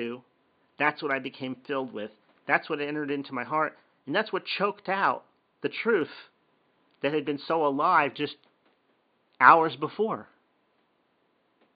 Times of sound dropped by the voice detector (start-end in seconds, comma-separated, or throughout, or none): none